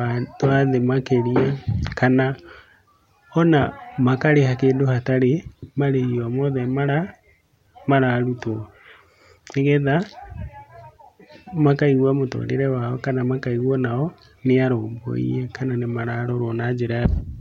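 No technical faults occur at any point in the recording.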